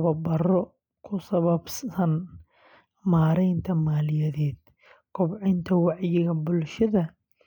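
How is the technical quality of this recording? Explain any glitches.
No technical glitches can be heard anywhere in the recording, and the signal keeps its level and continuity throughout.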